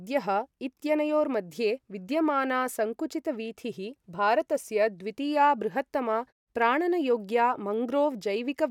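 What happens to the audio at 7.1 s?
Nothing goes wrong at 7.1 s; the speech plays through intact there.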